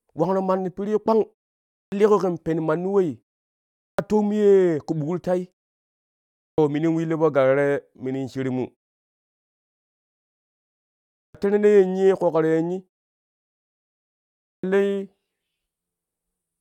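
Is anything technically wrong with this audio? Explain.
Yes, there's a clipped start after a pause, five times: at 1.84 s before "liiƙo ƙen pen manni", at 3.91 s before "toom ye ƙu", at 6.5 s before "minin willu po galo", and again at 11.27 s and 14.56 s. After each gap of half a second to just over two and a half seconds, the output device has gone to sleep and needs about 75 to 80 ms to come back. The speech snaps in abruptly with its opening sounds missing. The pauses themselves drop to silence, which is normal.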